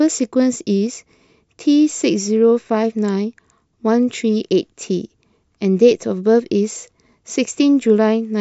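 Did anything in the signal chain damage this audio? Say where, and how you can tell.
No, none of the stages between capture and playback left any audible damage on this speech. Nothing in the sound points to a problem in the wiring, conversion, processing, transmission, storage or playback.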